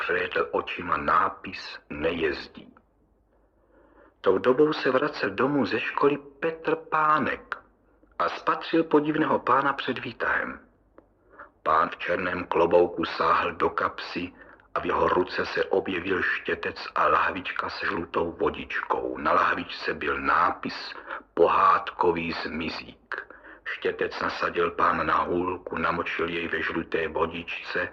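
Dull, band-limited and smeary until 4.0 s, then suddenly fuller with no gap: an adaptive stream starting at a low bitrate, consistent with roughly 16 stepping to 64 kbit/s.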